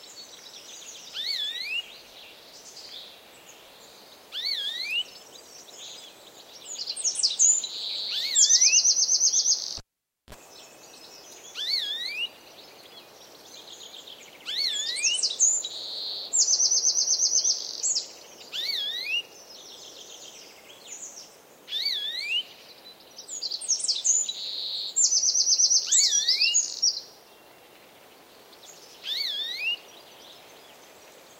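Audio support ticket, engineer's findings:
Cable pulled and plugged in, 9.78 to 10.35 s. Pop, then near silence for about 0.52 s, a 40 ms burst of 60 Hz mains buzz as the plug tip touches first, then a second pop on reconnection. Probable component: live input cable or jack.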